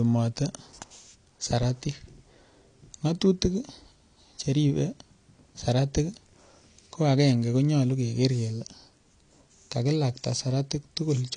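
AAC compression, throughout: nothing above 10.2 kHz, with dull, smeared speech and audible artefacts, likely from AAC-LC coding at a rate fitting 32 kbps.

Clock slip clicks, from 0.12 s to 11.35 s: single-sample slips roughly every 50 ms give a soft, steady rattle, likely from two unsynchronised clocks differing by about 400 ppm.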